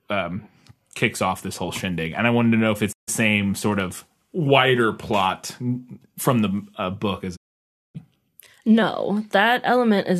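The receiver twice loses the digital signal and mutes until valid frames return, a digital broadcast dropout. At 2.91 s the speech fades out over 20 ms into a 0.14 s silence. At 7.35 s a 0.58 s gap follows. Speech sent during both gaps is lost.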